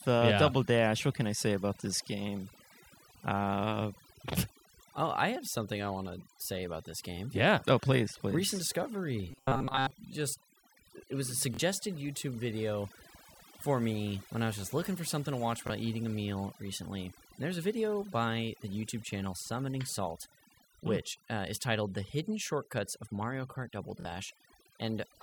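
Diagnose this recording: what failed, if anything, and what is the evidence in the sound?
Overdone noise removal runs the whole way through, so this is a call-processing stage issue. The background has been pushed to near silence with little twinkling specks left behind. That's a suppressor set far too hard. It's shutting individual frequency bands down whenever they sit close to its noise estimate, and the quieter bits of the speech are getting caught and removed along with the noise.

From 9.31 to 9.91 s there's a stretch of robotic sound from repeated short buffers. The speech turns into a stiff metallic buzz at 133 Hz that still loosely tracks what's being said. A fixed 133 Hz tone fits a buffer of roughly 7.5 ms being replayed over and over, with most of the real audio in that window skipped. The likely cause is the driver or buffer stage starving and looping its last block.

The network link shows Bluetooth stutter three times: 11.54 to 11.59 s just after "it was a", 15.67 to 15.70 s between "for something to watch" and "eating a meal recently", and 24.00 to 24.05 s. 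Each one is a short buzzy repeat, and then the speech jumps ahead as though it kept playing underneath. The gaps are about 46, 23 and 46 ms, which points to one or two lost packets of roughly 23 ms each. The receiver replays its last slice until fresh data arrives.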